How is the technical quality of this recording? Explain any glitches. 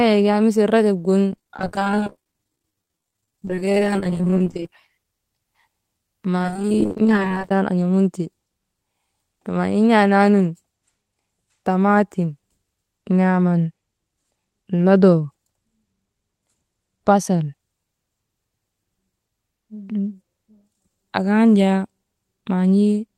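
The recording has two stretches of repeated packet loss (robotic sound), from 1.35 to 4.69 s, just after "rajob gin", and from 6.43 to 7.51 s, ending before "tan an̰amunte". Over each stretch, holes of up to about 22 to 25 ms recur rapidly and are patched by extending the preceding sound, concealing roughly 40% of the span. The result is choppy speech with pieces missing. Unlike a single dropout, the damage is a continuous rapid stutter rather than one isolated gap.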